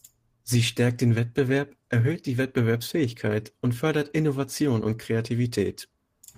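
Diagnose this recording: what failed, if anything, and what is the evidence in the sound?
Nothing in this speech recording points to a failure at any stage of the chain. There is no event in the sound that would count as evidence of a fault.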